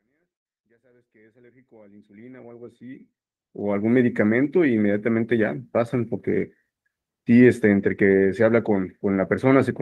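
No technical faults are audible.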